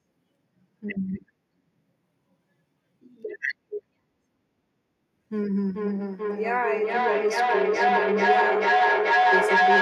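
From 5.4 s to the end, a second device in the same room replays the call and the first device's microphone recaptures it, producing feedback echo between two devices. The speech returns roughly every 0.4 s, thinner and ringing, and the repeats build to about 7 dB above the speech.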